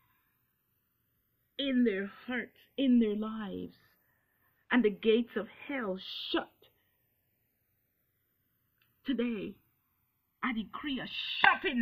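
Throughout, channels drift apart: clocks roughly 150 ppm off slide the delay toward a millisecond, so mono comb notches sweep one way, unlike looping flanging.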